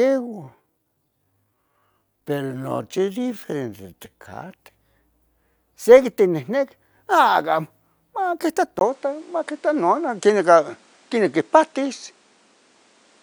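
The opening stretch, from 0.0 to 4.5 s, was most likely slowed by software to fill a longer slot, running at about 0.665 times its natural pace while keeping its pitch by repeating short slices of the waveform. The result is a time-stretched section: the speech drags until normal pace returns abruptly at 4.5 s.

At 8.79 s the input likely switched to a poorer device, with a short gap of about 20 ms marking the handover. From there to the end at 13.23 s the new path passes a narrower band, so the speech loses its crisp top end and sounds duller and boxed in. The level shifts by roughly 5 dB, and a different, fairly quiet background noise sits well beneath the speech.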